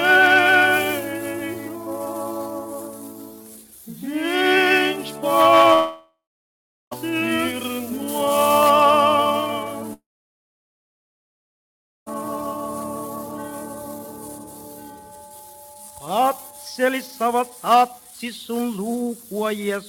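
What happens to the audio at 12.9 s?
Nothing goes wrong at 12.9 s; the audio plays through that moment intact, with no dropout, click, distortion or other fault.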